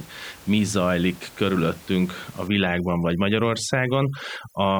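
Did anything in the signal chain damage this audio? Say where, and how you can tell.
Yes. From 2.48 s to the end, just after "mi zajlik körülöttünk a", overdone noise removal in the call-processing stage damages the audio. The room noise, about 23 dB below the speech before this point, collapses to near silence with twinkling specks. A suppressor set too aggressively is gating individual frequency bands whenever they sit near its noise estimate, and it strips out the quieter parts of the speech along with the noise.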